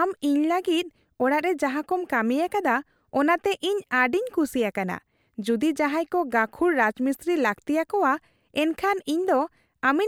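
Speech, with nothing technically wrong with it.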